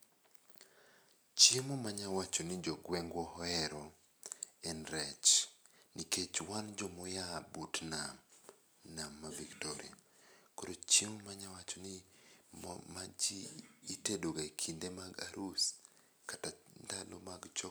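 No technical faults can be heard anywhere in the speech.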